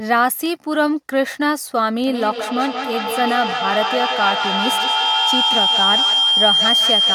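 Feedback howl takes over this speech clip from 2.07 s to the end. Sound leaves a loudspeaker, re-enters a nearby microphone on the same call and gains level each pass, narrowing to a tone around 3 kHz. It repeats roughly every 200 ms and peaks about 2 dB above the speech.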